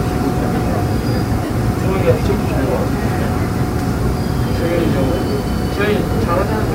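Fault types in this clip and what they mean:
Low bit depth without dither: A grainy, rough distortion runs through the whole clip and shifts with the sound itself, turning quieter passages gritty, with the quietest moments dropping out or sputtering between levels. The error sits roughly 25 dB below the signal. The likely cause is a signal reduced to about 6 bits by plain rounding with no dither, so the rounding error tracks the waveform instead of spreading out as a steady, neutral hiss.
Lost LE Audio frames: From 1.45 to 1.5 s the sound briefly smears into a noisy, blurred wash for about 50 ms before the normal sound returns. This fits roughly five consecutive 10 ms frames failing to arrive over a Bluetooth LE Audio link. The LC3 decoder fills the gap by repeating the last good spectrum with randomised phase signs, so the tonal detail dissolves into noise while the overall colour stays.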